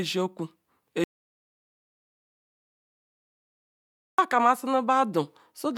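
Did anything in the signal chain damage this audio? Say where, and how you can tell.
Yes. The input path likely lost its source, through a disconnected device, a failed link or a mute, while recording continued writing silence. The speech stops abruptly at 1.04 s and resumes mid-flow at 4.19 s, leaving about 3.1 s of total silence with no room tone. The audio dropout to silence permanently removes whatever was said in that interval.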